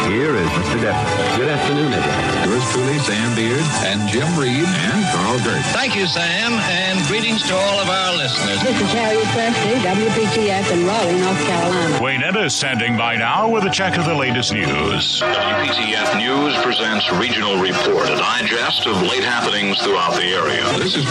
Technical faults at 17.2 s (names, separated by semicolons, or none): none